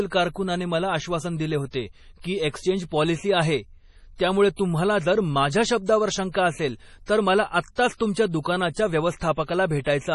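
Throughout, the speech carries heavy MP3 compression artefacts, likely from low-bitrate encoding (consistent with about 32 kbps): watery, swirling texture, with nothing above 11.4 kHz. Pre-echo, where block-spread quantisation noise leaks ahead of attacks as brief hiss, occurs at 2.21 s (33 ms, after "मला आश्वासन दिले होते"), 4.56 s (26 ms, after "एक्सचेंज पॉलिसी आहे त्यामुळे"), 7.06 s (24 ms), 7.75 s (24 ms, after "शंका असेल तर मला"), 7.94 s (58 ms) and 8.73 s (40 ms).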